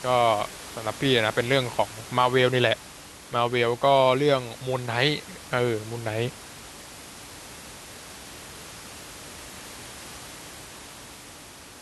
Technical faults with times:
none

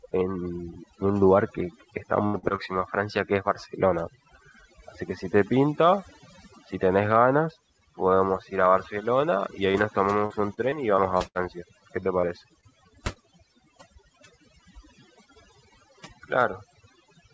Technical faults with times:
0.00-17.34 overdone noise removal
2.26-2.60 repeated packet loss (robotic sound)
9.72-11.37 repeated packet loss (robotic sound)
12.01-13.25 repeated packet loss (robotic sound)

